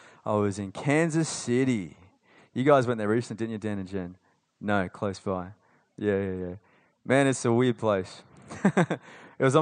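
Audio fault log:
Nothing to log for this one, since no faults turn up anywhere in the speech.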